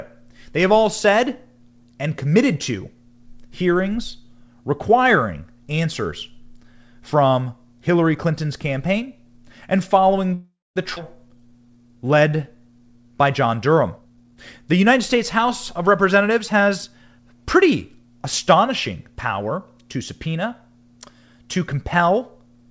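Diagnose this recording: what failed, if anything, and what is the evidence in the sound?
Network delivery stalled mid-call, likely packets held up in transit until the jitter buffer ran dry. From 10.34 s to 10.78 s the speech stops and the receiver fills the hole: the last sound is stretched into a fading buzz for roughly the first half, then about 0.22 s of silence. When audio resumes it picks up exactly where it left off, so nothing is lost, but a 0.42 s call audio freeze has been inserted into the speech.

A skip ahead follows at 10.96 to 10.98 s at the network and jitter-buffer stage. After the freeze, a chunk of audio was dropped, roughly a fifth of a second of speech. The join is nearly seamless, with only about 5 ms of fill, so the speech jumps forward abruptly. Part of what was said is simply gone, and the timing lurches rather than pausing.

The jitter buffer then ran low and raised its reserve. 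From 11.29 s to 13.09 s the receiver repeatedly duplicated single pitch periods and pause fragments, adding 241 ms in total. The speech plays at about 87% speed while keeping its pitch, so syllables sound drawn out. This jitter buffer slow-down is time-stretching by the call processing, not anything the talker did, and it also fits a buffer rebuilding after the preceding disruption.

Once the buffer overfilled, the opposite correction ran. From 13.96 s to 17.03 s the jitter buffer speed-up cut out short slices of one or a few pitch periods again and again, removing around 0.4 s altogether. Speech runs at about 114% speed with unchanged pitch and sounds rushed and clipped in rhythm. Throughout, the call path's band limit is audible: nothing above 8 kHz, which fits G.722 wideband coding.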